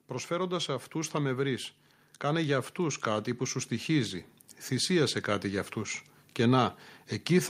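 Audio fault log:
2.22–6.05 s, automatic gain rising: the AGC decided the input was too quiet and slowly pushed its gain up by about 6 dB across nearly four seconds, so the speech and the background noise swell together rather than the voice alone getting louder.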